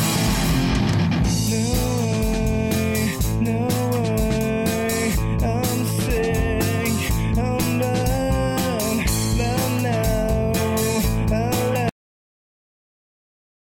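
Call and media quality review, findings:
Cut-off end at 11.89 s: sound stops mid-event, dead digital silence to the end, no decay tail unlike a fade-out. Final buffers never written; capture or file-finalise stage.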